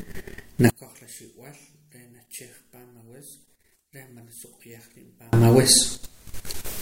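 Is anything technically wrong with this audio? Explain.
Yes. From 0.70 to 5.33 s the speech drops by about 31 dB to a faint residue, likely one channel inverted, cancelling the centred content when summed to mono.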